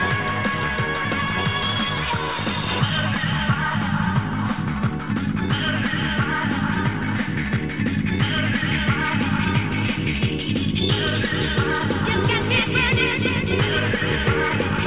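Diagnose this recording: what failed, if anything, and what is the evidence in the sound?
Nothing failed in this recording; its call path leaves no content above 4 kHz, which fits a narrowband G.711-style call codec.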